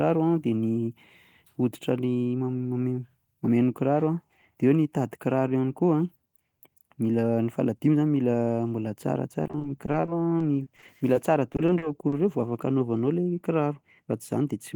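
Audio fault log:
9.43–11.16 s, repeated packet loss (robotic sound): the speech keeps dropping out in short bursts, none longer than about 20 ms. Each hole gets patched by stretching the last bit of sound, roughly 290 ms of filler in all, so it comes out choppy.
11.52–12.14 s, repeated packet loss (robotic sound): it starts up again, a bit worse. Gaps run to 40 ms and about a quarter of the stretch is patched.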